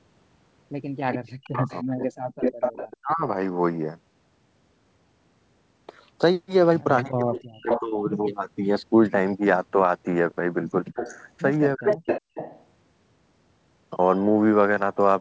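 Speech, carried over a band that stops at 8 kHz, which fits a G.722 call path at 64 kbps. The first fault is echo leak, likely from a loudspeaker whose echo canceller let part of the returned signal through. A delayed copy of the speech appears at 1.12–2.97 s (337 ms late, about 5 dB below the direct sound), 7.36–7.8 s (370 ms, roughly as loud as the speech), 10.95–11.25 s (391 ms, about 10 dB down) and 11.87–12.65 s (398 ms, about 5 dB down). It is not reverberation, because the copy comes back as a distinct repeat about a third of a second later rather than as a smooth decaying tail. The second fault is speech suppressed in double talk: with both sides active, the canceller likely could not separate the talker from the echo, so it turned both down. The level dips by about 25 dB at 1.48–1.73 s, about 35 dB at 3.01–3.24 s, about 40 dB at 7.08–7.97 s (roughly 0.7 s in total) and about 40 dB at 11.75–12.07 s. 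These dips are gain ducking during double talk, not packet-loss dropouts.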